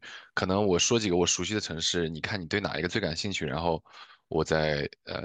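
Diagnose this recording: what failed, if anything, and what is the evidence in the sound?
Nothing failed, and the sound gives no evidence of a fault at any stage of the chain.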